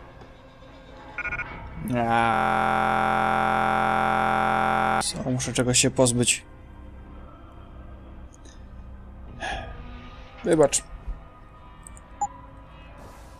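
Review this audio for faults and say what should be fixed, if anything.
From 2.34 to 5.01 s the audio turns into a steady buzz at 43.1 Hz. A single 23.22 ms fragment repeats exactly, over a hundred times, which fits a 1024-sample buffer. This is a system hang loop: the driver stalled while the hardware kept replaying its ring buffer. To prevent it, fix the stall and have the driver fill the buffer with silence when new data stops arriving.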